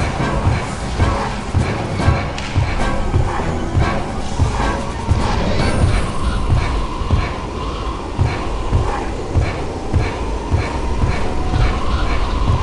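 No fault can be heard anywhere in the clip.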